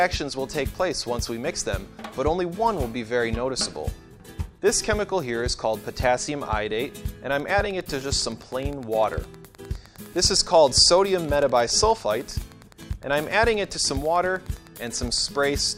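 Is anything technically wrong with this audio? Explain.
Yes. From 7.35 s to 15.35 s there is Wi-Fi interference: a nearby Wi-Fi radio is coupling into the audio circuit, which rectifies its transmitted beacon bursts, spaced 102.4 ms apart, into the audio band. The result is a steady ticking at roughly ten clicks per second, sitting around 30 dB below the audio and continuing for the full eight seconds before stopping at 15.35 s.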